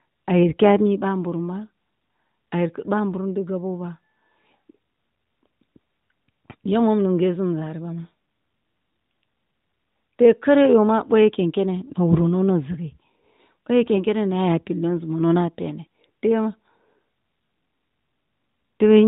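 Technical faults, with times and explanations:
8.26–8.28 s, 11.88–11.92 s and 13.96–13.99 s: lost AMR speech frames. Each is a brief dip or warble, consistent with a single 20 ms frame failing its check. The narrowband decoder filled the gap by repeating the last good pitch and vocal tract settings at lower gain.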